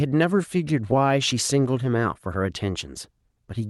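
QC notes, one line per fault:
No faults are heard in this speech. It has come through a WebRTC call path, and its top end stops near 12 kHz, which fits Opus at about 32 kbps.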